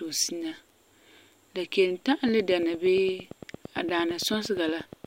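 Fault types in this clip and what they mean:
Train of clicks: a run of near-identical pulses, here about 8.7 per second at a steady, regular spacing from 2.28 s to 5.06 s, around thirty in all, ticking over the speech and through its pauses and peaking a few dB above it. Their sameness and even pacing set them apart from crackle, whose pops vary in size and arrive at random. The likely cause is interference from nearby equipment or a faulty connection or power supply.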